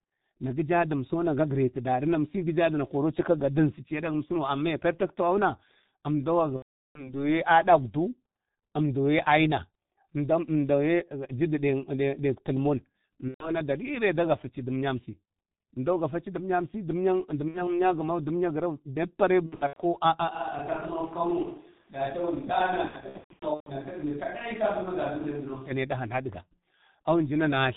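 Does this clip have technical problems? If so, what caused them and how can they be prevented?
Yes. The whole clip went through the G.723.1 codec at 6.3 kbit/s, which cuts everything above 4 kHz, so the speech is heavily muffled and hoarse, with smeared consonants. Using a wideband codec such as G.722 or Opus would prevent this.

VoIP packet loss concealed by the speech codec occurs at 6.56–7.15 s, 13.28–13.61 s (just before "dəri ne dagafa ci"), 17.48–17.74 s, 19.46–19.81 s and 22.88–23.72 s. During each gap the decoder extrapolated from its last pitch and filter, lowering the gain as it went. The first gap fits about 13 lost 30 ms frames. The last two sound like scattered losses rather than one gap. A jitter buffer, forward error correction or a more reliable network path would reduce these dropouts.

From 20.33 to 25.70 s the voice suddenly turns roomy and hollow, drops about 5 dB and picks up faint room noise around 35 dB below the speech, then snaps back. 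The likely cause is a switch to a distant microphone after the close one dropped out. Securing and monitoring the close microphone would avoid this.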